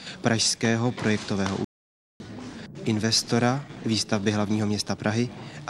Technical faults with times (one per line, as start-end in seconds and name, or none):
1.65-2.20 playback stall